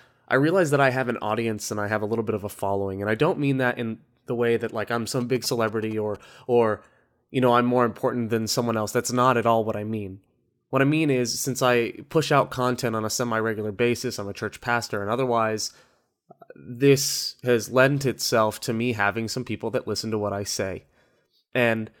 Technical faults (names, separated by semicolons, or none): GSM signalling bursts